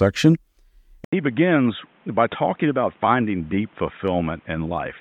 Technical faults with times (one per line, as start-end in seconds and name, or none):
1.05-5.00 input switched to a poorer device